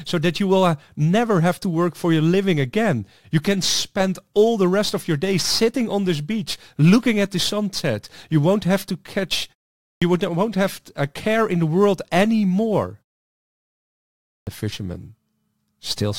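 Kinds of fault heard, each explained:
Clipped start after a pause: the output path drops into a low-power or unlocked state during silence and needs time to resume. Here speech restarts abruptly, missing about 97 ms at 9.92 s after a 0.46 s pause and about 110 ms at 14.36 s after a 1.41 s pause.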